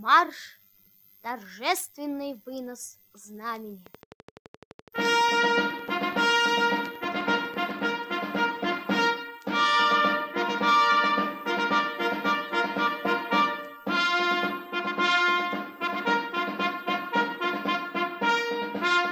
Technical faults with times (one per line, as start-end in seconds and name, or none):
3.86-7.89 train of clicks